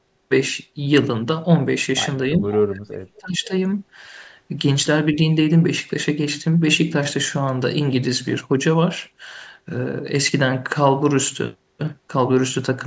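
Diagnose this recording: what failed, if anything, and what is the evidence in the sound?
The call processing failed twice in the echo canceller. The speech dips by about 10 dB from 2.31 to 2.42 s. It then drops much deeper, by about 40 dB, from 2.66 to 3.52 s. This is likely speech suppressed in double talk, where the canceller ducked the near talker along with the echo.

A faint delayed copy of the speech appears from 2.46 to 2.58 s. It trails the original by 339 ms and sits about 15 dB below it. This is likely an echo leak: one side's loudspeaker echo was not fully cancelled and returned down the line.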